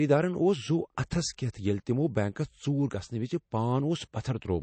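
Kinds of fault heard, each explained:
MP3 compression: Nothing in the speech reaches above about 8.3 kHz, and the damage is plainly audible throughout, with a watery, swirling quality on s sounds and blurred consonant onsets. This is likely heavy MP3 encoding at a low rate, which fits roughly 32 kbps, where the encoder drops weak frequency lines that flicker between frames. That flicker separates it from a simple low-pass filter, which would only dull the top end without adding swirl.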